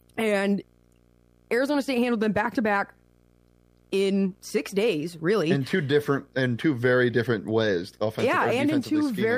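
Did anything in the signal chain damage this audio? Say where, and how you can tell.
Yes. Video or display buzz enters through the analogue wiring throughout. A 59.94 Hz buzz with hash, plus a 15.7 kHz line tone, sits well below the speech.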